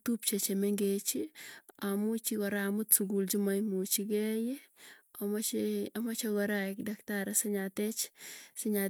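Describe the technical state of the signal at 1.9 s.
At 1.9 s the speech signal is intact, with no audible technical fault at that moment.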